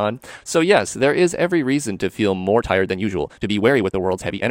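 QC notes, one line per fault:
2.53–4.51 s, time-stretched section: from 2.53 s to the end the pace jumps abruptly to about 1.51 times normal speed while the pitch stays where it was, so the speech sounds rushed. This is likely a software time-compression step fitting the audio into a shorter length, discarding short overlapping segments to preserve pitch.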